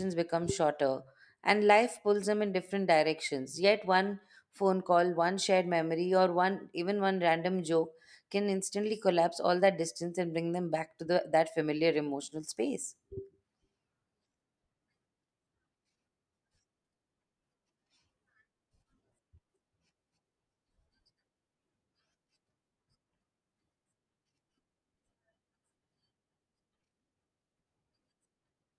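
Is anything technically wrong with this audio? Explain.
No, nothing technically wrong stood out on listening to this speech recording.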